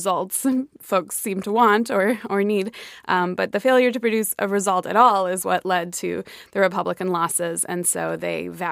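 Speech with a resampler restarted on every block, running throughout: a 48 kHz to 44.1 kHz conversion done in isolated 50 ms blocks leaves an edge error every block, heard as a 20 Hz ticking buzz that rides on the speech and stops in pauses, unlike steady hum.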